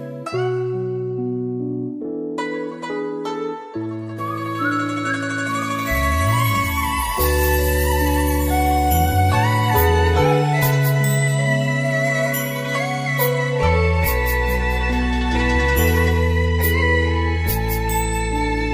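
No technical faults are audible.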